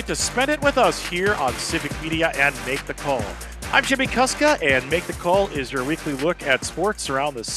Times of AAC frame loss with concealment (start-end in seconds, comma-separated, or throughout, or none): none